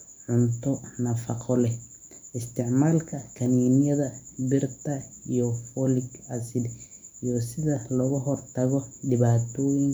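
No technical faults can be heard in this speech recording. Nothing in the audio calls for a timestamp or an explanation.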